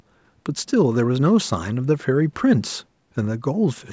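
No faults are present: the speech shows only the ordinary effects of call microphone processing, with the lowest bass rolled off and nothing above 8 kHz.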